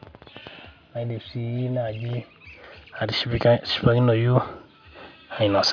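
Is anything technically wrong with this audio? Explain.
No, there's nothing technically wrong here; this bit of speech comes through without any problems I can pick out.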